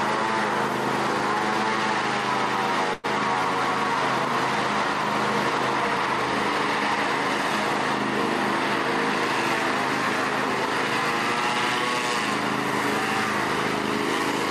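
Packets were likely held up in transit long enough for the jitter buffer to run dry, producing a call audio freeze from 2.93 to 3.06 s. The receiver stretches the last bit of sound into a brief fading buzz that fills about 100 ms, then picks up exactly where the audio stopped. Nothing is lost; instead a short gap is inserted, so everything after it arrives roughly 100 ms later than before.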